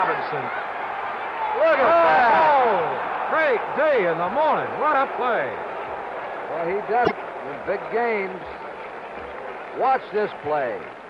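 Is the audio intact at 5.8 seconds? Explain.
Yes, at 5.8 seconds the audio is intact, with no dropout, click, distortion or other audible fault at that point.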